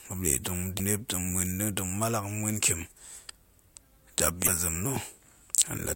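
Speech with two brief bursts of damaged data in a compressed stream, at 0.75–0.80 s and 4.43–4.48 s. Corrupted bytes there make the decoder misread frames and lose sync, so each roughly 50 ms span comes out as a short glitch.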